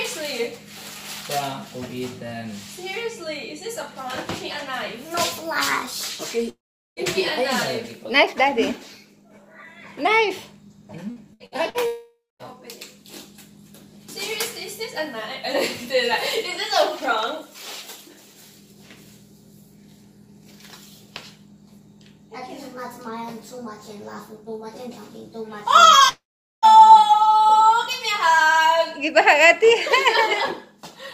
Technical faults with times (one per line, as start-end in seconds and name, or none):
6.49-6.99 long network dropout
11.10-11.77 repeated packet loss (robotic sound)
11.86-12.54 long network dropout
26.09-26.65 long network dropout